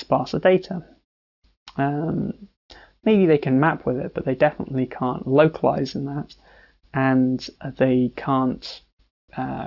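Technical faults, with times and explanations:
Throughout, aliasing: energy above about 6 kHz folds back into the band below it as gritty, metallic tones at unrelated pitches, roughly 25 dB under the main sound. This fits a sample-rate drop to 12 kHz without an anti-aliasing filter first.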